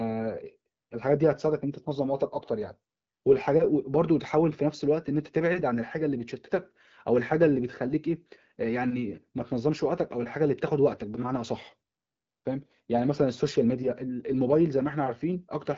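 No technical faults can be heard anywhere in the speech. The AMR wideband (HD Voice) codec path at 12.65 kbit/s is audible as a light coding character and a top end that stops at about 7.5 kHz.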